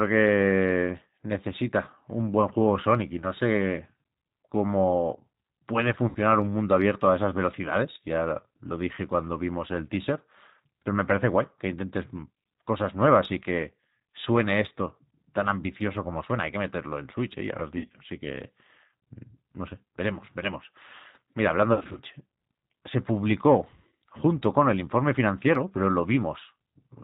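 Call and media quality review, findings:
G.729 codec, entire call. Speech band-limited below 4 kHz, plainly rough and synthetic. 8 kbit/s model-based coding rebuilds speech from filter and pitch parameters.

VoIP packet loss concealed by the speech codec at 6.09–6.17 s, between "cómo puede" and "un mundo abierto a", 17.78–17.97 s after "ya lo has", and 21.73–22.00 s. Stretched, fading extrapolated sound. Decoder repeats last pitch and filter at falling gain; speech weak afterwards.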